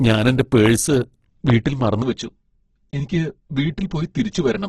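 Opus compression runs through the whole of this speech recording. The sound is rough, grainy and noisy-textured, with nothing above 12.1 kHz, which is likely the result of an Opus encoder in its music mode working at a very low rate, roughly 12 kbps. Loud pops strike at 0.66–0.68 s and 1.50–1.52 s, peaking about 10 dB and about 15 dB above the speech. They are sharp transient bursts laid over the audio, which continues underneath, probably from an electrical step such as a switch, static discharge or driver glitch. Channel delay (comb filtering) takes over from 2.02 s to the end. One channel lags the other by around 5 ms before the two are summed to mono, so shared content cancels at evenly spaced notches starting near 100 Hz, leaving the speech hollow and phasey.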